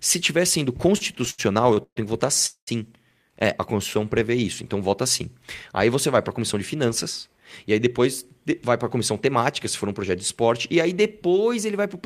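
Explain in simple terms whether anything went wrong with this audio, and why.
Several delivery problems disrupt the timing of this speech, though almost nothing is actually lost.

From 0.97 to 1.98 s, between "tiver sendo" and "que votar", there are repeated stalls (stutter). Audio kept arriving late, so the receiver ran out ten times and stretched the last sound to fill about 327 ms, the longest hold being 134 ms. The speech drags and stutters.

Right after "que votar", from 2.46 to 2.69 s, a call audio freeze inserts a 209 ms gap. The receiver extends the last sound and then goes quiet for about 100 ms before resuming where it stopped. The likely cause is audio held up in transit.

From 3.72 to 4.41 s, just before "então vota sim", a jitter buffer slow-down plays the speech at 91% speed. The receiver repeated tiny slices of sound, adding 71 ms to rebuild its reserve. Sounds are drawn out but the pitch stays the same.

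Jitter buffer speed-up occurs twice. From 6.40 to 8.00 s the speech runs at 104%, with roughly 70 ms trimmed out. From 8.53 to 9.41 s it runs at 105%, with about 50 ms removed. Both times the receiver cut short pieces to shed excess delay, so the speech runs faster at the same pitch, and the second one sounds slightly hurried.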